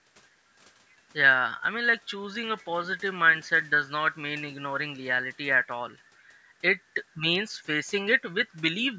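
No technical faults can be heard anywhere in the recording.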